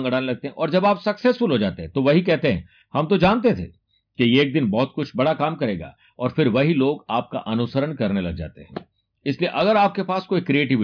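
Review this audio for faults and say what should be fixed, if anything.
Nothing here needs fixing; I listened through the whole recording and heard no technical faults to flag.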